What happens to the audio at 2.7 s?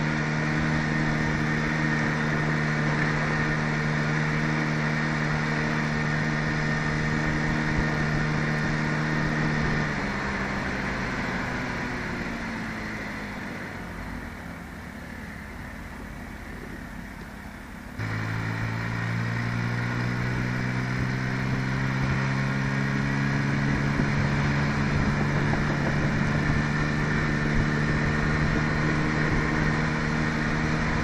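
Nothing goes wrong at 2.7 s; the audio plays through that moment intact, with no dropout, click or other disturbance.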